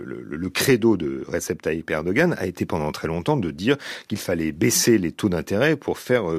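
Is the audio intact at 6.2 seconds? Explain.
Yes, at 6.2 seconds the speech plays through intact, with no dropout, click, distortion or other fault to be heard at that moment.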